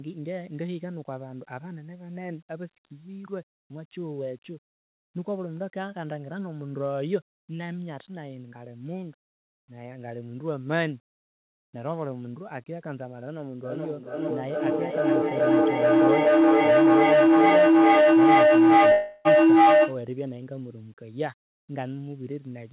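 At 13.63 s a feedback howl starts building: two devices in the same room are evidently on the call, so each trip around the mic-to-speaker loop comes back louder. It settles into a tone around 300 Hz, pulsing roughly every 400 ms, and peaks about 15 dB above the speech before it breaks off at 20.07 s.

Inside that, from 18.92 s to 19.28 s, about 330 ms of audio goes missing, likely a long network dropout. The gap never falls silent. Instead you hear a fading buzzy smear filling the hole, narrowband like the rest of the call with nothing above 4 kHz, before the audio resumes with that stretch simply gone.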